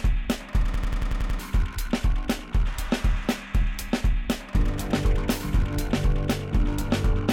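From 0.74 to 1.39 s the music stops moving forward and stutters like a machine gun: one fragment of about 92.9 ms repeats seven times at roughly 10.8 Hz before playback resumes, with around 0.7 s of the music never heard. This is a system hang loop. The computer or its driver stalled while the audio hardware kept replaying the same ring buffer, and the loop length fits a 4096-sample buffer.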